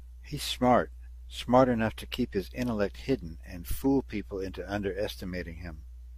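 No technical faults can be heard anywhere in the speech recording; the signal holds steady throughout, with nothing disturbing it at any point.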